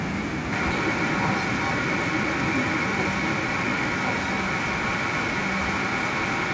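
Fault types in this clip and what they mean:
Echo leak: From 0.51 s right to the end, there's a second copy of the speech trailing the first by about 1.1 s, and it's roughly as loud as the original, so the two overlap and smear together. The likely cause is a far end on loudspeaker whose echo canceller let its mic pickup slip back into the call. The echo shares the same top end as the direct speech, cut off around 8 kHz, which fits a G.722 call path.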